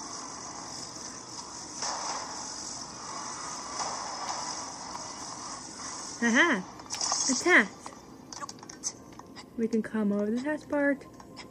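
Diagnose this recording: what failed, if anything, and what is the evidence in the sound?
Nothing failed in any stage.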